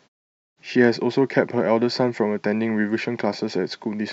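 No technical faults can be heard in this speech recording; the signal stays intact, with nothing distorted or out of place.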